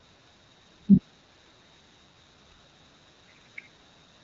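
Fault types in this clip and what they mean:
AMR wideband (HD Voice) codec: throughout, a vocal-tract speech model at a low rate, consistent with 8.85 kbit/s, leaves the speech rough and raspy, with nothing above 7.6 kHz.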